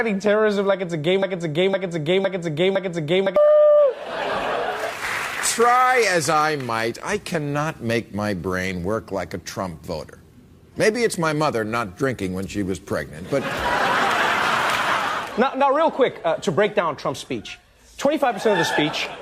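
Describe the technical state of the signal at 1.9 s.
At 1.9 s you're right in the middle of a broken-record loop that runs from about 1.22 s to 3.36 s. A fragment of roughly 510 ms plays four times back to back, each repeat identical, so it stutters in place instead of moving forward. The likely cause is a stall in the player, encoder or stream that kept resending the last chunk it held, and whatever should have played across that span is simply gone.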